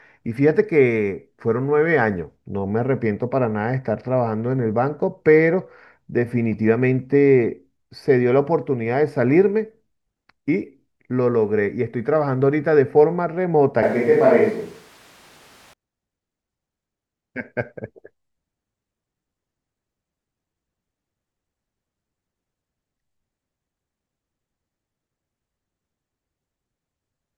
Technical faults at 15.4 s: switch to a distant microphone

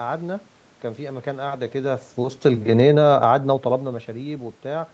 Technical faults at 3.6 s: automatic gain rising

